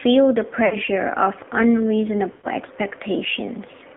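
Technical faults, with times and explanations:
Throughout: AMR narrowband mobile codec. The signal passed through AMR-NB at a bitrate of 7.4 kbps, with nothing above 4 kHz and a line band of roughly 200 Hz to 3.5 kHz. A vocal-tract model driven by sparse pulses at this low rate leaves the speech plainly buzzy and synthetic.
0.66–0.77 s and 2.32–2.47 s: lost AMR speech frames. Frames failed their checks, so the decoder reused the last good pitch and vocal tract settings at falling gain. About 60 ms was lost at the first point and 120 ms at the second, where the sound stretches and fades before recovering roughly.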